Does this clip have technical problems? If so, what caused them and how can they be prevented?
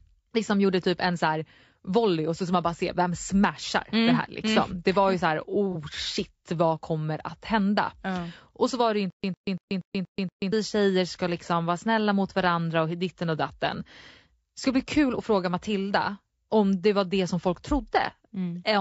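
Yes, three. The whole speech clip sounds rough and grainy, with noise filling the gaps between harmonics and a thin, synthetic top end. That's likely low-delay AAC compression, AAC-ELD at something around 32 kbps, where short frames can't resolve pitch well. Giving it more bitrate would clean it up.

At 5.72 to 5.76 s there's a brief smeared, noisy patch lasting about 30 ms, which fits a single lost frame. That's AAC frame loss with concealment: the decoder patched the hole from the last good spectrum. Forward error correction or a bit of redundancy on the network path would prevent it.

From 9.10 to 10.52 s you get a stutter with silent gaps. A 104 ms fragment repeats six times, each followed by about 133 ms of dead digital silence, so it returns every 237 ms and the audio in between is gone. That's likely the player stalling and replaying its last buffer. A deeper jitter buffer, or muting on underrun instead of replaying, would prevent it.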